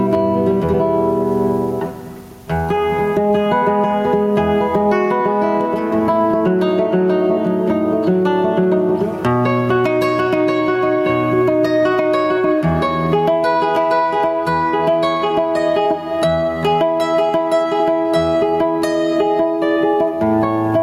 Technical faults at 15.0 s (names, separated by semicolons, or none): gain pumping